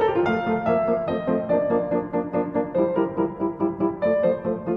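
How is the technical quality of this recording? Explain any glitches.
No glitches can be heard; the signal stays technically intact and continuous throughout, with nothing interrupting or degrading it.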